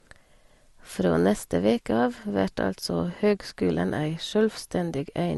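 From start to finish the speech sits under a hard ceiling, with nothing above about 12.1 kHz. Below that ceiling there's a mix of artefacts that don't belong to a single codec: the artefacts of different codecs heard together. That points to transcoding between lossy codecs, likely an MP3 pass at around 59 kbit/s followed by Opus at around 48 kbit/s, with the second encoder wasting bits on the first one's damage and leaving its own on top.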